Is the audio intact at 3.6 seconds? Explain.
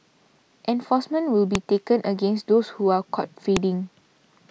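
No. At 3.57 s the speech is broken by a file header played as audio: leftover WAV header bytes from a joined piece are read as samples, giving a sharp, loud click. It shows as a near-instant waveform spike and a thin full-height vertical line on the spectrogram.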